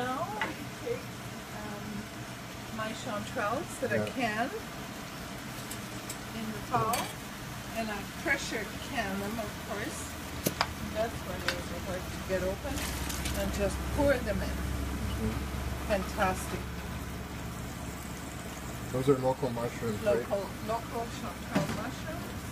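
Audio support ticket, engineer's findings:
Digital radio blending to analogue, 12.50 s to 16.80 s. Receiver lost the digital signal and cross-faded to the station's FM broadcast, then back. Each blend takes about 0.27 s. Hiss audible during the FM stretch, roughly 25 dB below the programme. Level shifts by about 2 dB across the switch. Probable component: hybrid tuner's blend logic. Mechanism: weak digital reception triggering fallback to the analogue path of the same station.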